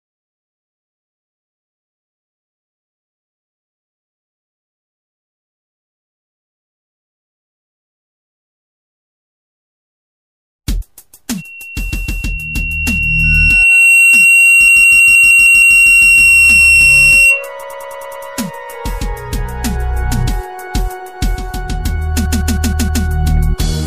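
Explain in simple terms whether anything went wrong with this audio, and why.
Two things went wrong. From 11.37 to 17.49 s there is loudspeaker feedback squeal. A microphone picked up its own loudspeaker, so a single 2.7 kHz tone fed itself, swelling over about two seconds until it stood well above everything else. Unlike a steady whistle or hum, it grows on its own.

The second problem is repeated frames. The same short chunk plays again and again, causing a stutter at 11.93 to 12.24 s (a 157 ms piece heard twice more), 14.67 to 15.77 s (the same length, seven more times), 17.62 to 18.25 s (a 105 ms piece, six more times) and 22.25 to 23.03 s (157 ms, five more times). Unlike a dropout, nothing is lost. The audio becomes about 2.8 s longer.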